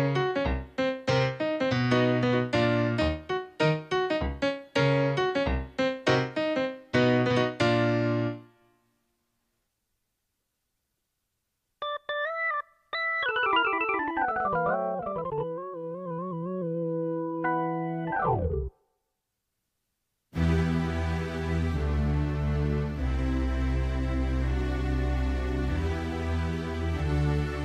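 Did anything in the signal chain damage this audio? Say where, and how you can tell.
No, nothing stood out on listening that would point to damage anywhere in the signal chain.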